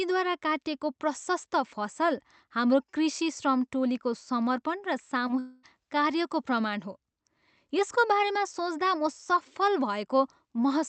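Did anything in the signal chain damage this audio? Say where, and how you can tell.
Yes. Network stage: a short concealed packet loss at 5.27 to 5.31 s leaves a brief smear, about 16 ms patched from the preceding sound, too short to be a dropout.

A long network dropout follows at 5.39 to 5.65 s, likely a network stall. About 240 ms is bridged by a continued, fading buzz or hiss with no silence, far longer than the earlier smear.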